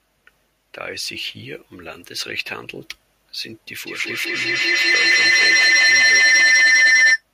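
At 3.83 s a feedback howl begins and runs to 7.25 s. Sound leaks from loudspeaker to microphone and returns louder each trip. It narrows to a tone around 2 kHz, pulsing roughly every fifth of a second, peaking about 15 dB above the speech.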